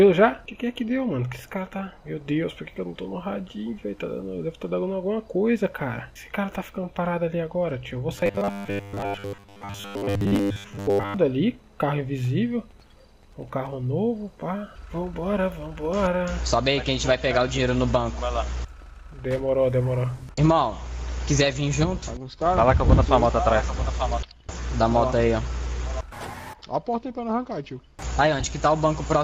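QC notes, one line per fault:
8.16–11.17 s, robotic sound from repeated short buffers: the audio collapses into a rigid, metallic buzz at a fixed 100 Hz that only loosely tracks the underlying sound for about 3 seconds. The likely cause is late-arriving audio being covered by looping the most recent 10 ms segment, with roughly 70 percent of the span made of these repeats rather than real signal. Each repetition imposes that 100 Hz periodicity, producing the mechanical tone.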